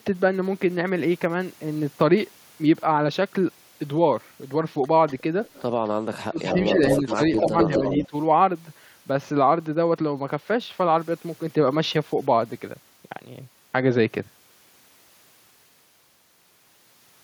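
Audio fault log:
5.08–5.89 s, echo leak: the far end's echo canceller likely let part of its loudspeaker pickup through, so faint scraps of the voice return about 244 ms late, at 5.08–5.13, 5.45–5.62 and 5.85–5.89 s, about 25 to 35 dB down.
6.40–6.74 s and 6.91–8.08 s, echo leak: the leak grows, likely from the same canceller, and the delayed copy (245–246 ms) sits only about 5 dB under the direct voice.
5.94–7.20 s, speech suppressed in double talk: with both sides talking, the echo canceller likely could not separate the talker from the echo and turned both down. The voice dips in pieces totalling about 0.7 s, by up to about 30 dB.
7.39–7.94 s and 8.10–8.14 s, speech suppressed in double talk: further likely clamping by the canceller during overlap brings shallower dips, about 10 dB over roughly 0.3 s and then about 15 dB for a brief 40 ms.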